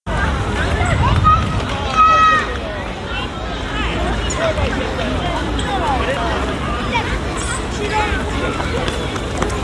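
No technical faults can be heard anywhere in this recording of sounds.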